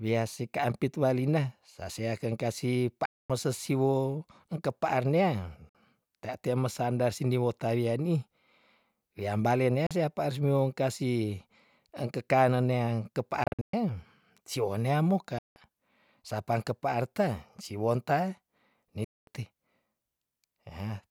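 A speech clip with six sharp-edged silent gaps where the audio resumes as if it had kept playing, most likely a Bluetooth dropout from late packets: 3.05 s (240 ms), 5.69 s (53 ms), 9.86 s (40 ms), 13.44 s (bits scattered over about 290 ms, longest 120 ms), 15.38 s (173 ms), 19.04 s (227 ms).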